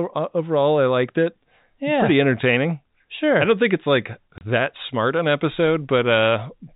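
At 4.38 s the speech drops out for 30 ms, a case of packet loss filled with silence. One packet never arrived, and the receiver played nothing in its place. The gap has hard edges. The telephone-band G.711 coding sounds narrow, with nothing above 4 kHz.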